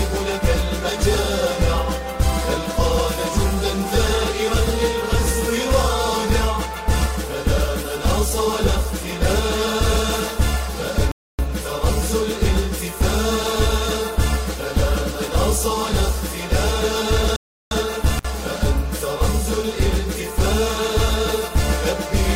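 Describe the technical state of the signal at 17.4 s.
At 17.4 s the sound is caught in a rebuffering stall, running from 17.36 to 17.71 s. The player exhausted its downloaded audio and froze until more data arrived, so the output drops to silence for 350 ms and then picks up exactly where it halted. That seamless continuation separates it from a dropout: no material is missing across the gap; the stall only inserts extra time into the playback.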